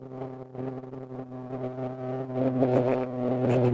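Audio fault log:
0.58–3.73 s, clock drift buffer slips: a click recurs every 1.01 s while sound is present, likely from two devices on mismatched clocks, roughly 400 ppm apart, so the buffer between them periodically drops or repeats about 15 samples. The strict regular spacing separates it from random dropouts.
0.80–2.00 s, repeated stalls (stutter): 17 brief holds, the longest 16 ms, extend the last sound for 174 ms in total, about 15% of this span. Nothing is lost, but the audio drags and hiccups.
2.90–3.61 s, jitter buffer slow-down: the receiver repeats single pitch periods to rebuild its reserve, adding 87 ms and running this stretch at 89% speed with pitch unchanged. Sounds are drawn out smoothly, not broken up as in the stalls.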